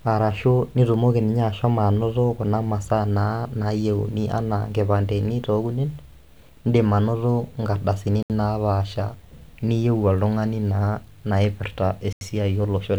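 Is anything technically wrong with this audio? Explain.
Yes. The speech drops into a block of digital silence twice, at 8.23 s for about 72 ms and at 12.13 s for about 85 ms, the second length fitting a 4096-sample buffer. The output likely wasn't filled in time, so zeros replaced the signal, and the abrupt cut and return are heard as a brief hole. On a waveform it shows as a near-flat line; a spectrogram shows a blank vertical stripe.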